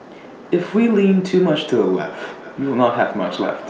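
From 2.21 s to the end there's feedback echo between two devices: a second device's mic picks up the other's playback, so the sound returns about every 400 ms, peaking about 17 dB below the speech.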